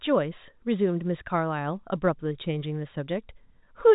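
No technical faults can be heard in the speech at any point. It carries the narrow band of G.711 telephone coding, with nothing above about 3.8 kHz and at most a faint grain of coding noise riding under the signal.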